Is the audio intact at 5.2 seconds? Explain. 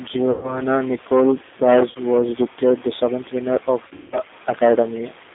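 No. At 5.2 s, as through the whole clip, the speech carries plainly audible G.729 codec damage, consistent with an 8 kbit/s coder that rebuilds each 10 ms frame from a vocal tract filter, a pitch predictor and a few pulses. The band is confined to roughly 250 Hz to 3.6 kHz, and the speech sounds rough and synthetic.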